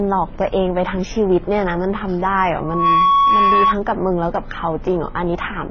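From start to end, nothing sounds above about 6.8 kHz. Smeared, swirly artefacts of different kinds sit together on the speech. This likely comes from transcoding between lossy codecs. It fits a low-rate MP3 later re-encoded as HE-AAC, each stage adding its own damage.

From 2.59 to 3.75 s, a loudspeaker feedback squeal appears. A tone near 1.1 kHz swells over roughly a third of a second, then rings a few decibels above the speech. The microphone is hearing its own loudspeaker, and the loop gain exceeds one there.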